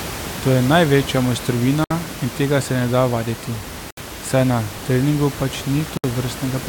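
At 1.84 to 1.91 s, 3.91 to 3.97 s and 5.97 to 6.04 s, each about 65 to 67 ms long and recurring every 2.0 s, the speech drops out in a gap at a join of encoded pieces. Separately encoded segments were joined without trimming the encoder's start delay and end padding. Even the room noise, about 12 dB below the speech, vanishes. Each gap shows as a blank vertical stripe on a spectrogram and a flat line on the waveform, with softened edges.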